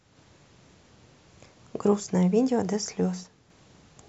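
One stereo channel likely drops out between 3.24 and 3.50 s, leaving only the other side to carry the signal for roughly a quarter of a second. Once the two sides are summed to mono, the speech that was common to both loses half its contribution. It falls abruptly by about 6 dB, a sudden dip in loudness with clean edges rather than a fade. Anything present only on the missing side vanishes for that stretch and returns when the channel does.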